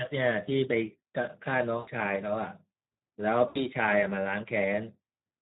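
Speex codec damage runs throughout this speech recording. Its code-excited coding has too few bits to rebuild the excitation, leaving the voice plainly noisy and hoarse, which suggests a bitrate around 11 kbps. VoIP packet loss concealed by the speech codec breaks in at 1.77 to 1.90 s and again at 3.48 to 3.59 s. The decoder stretches its last pitch and spectral shape to fill the gaps, with the level fading frame by frame, suggesting roughly 100 ms and 80 ms of lost audio. Each gap leaves the voice weakened briefly after it ends.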